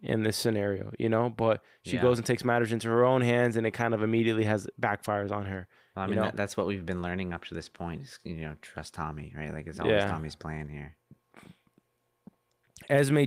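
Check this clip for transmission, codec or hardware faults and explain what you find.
No transmission, codec or hardware fault can be heard anywhere in the speech; the signal stays continuous and stable throughout.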